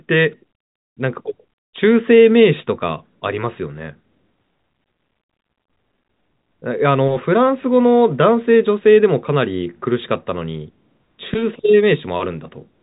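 Nothing goes wrong anywhere in this speech; it simply carries the usual telephone-band sound of G.711 coding, with nothing above about 3.8 kHz.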